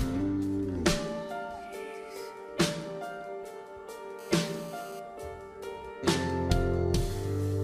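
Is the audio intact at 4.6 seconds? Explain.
No, not at 4.6 s. That moment sits inside a burst of GSM phone buzz running from about 4.19 to 5.0 s. A 2G handset nearby is transmitting in pulses about 217 times a second, and the audio circuitry is rectifying those radio bursts into the signal path. What you hear is a hard, raspy buzz at roughly 217 Hz with a stack of harmonics, sitting about 21 dB below the audio and having nothing to do with it. It holds steady across the span, which fits a phone that's on a call.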